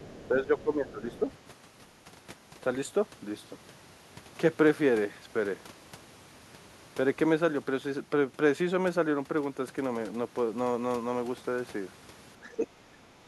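An echo canceller that likely failed to remove the loudspeaker signal lets the other side's voice leak through from 0 to 0.28 s and again from 1.12 to 1.37 s. It sits faint, roughly 25 dB below the talker, as a second voice behind the speech.

Overlapping with this, from 0.08 to 1.24 s, the canceller likely could not tell double talk from echo and turned everything down. The speech is suppressed in double talk, dipping by about 10 dB over roughly a second. The same thing happens again from 12.4 s to the end, where the level drops by about 15 dB for around 0.7 s.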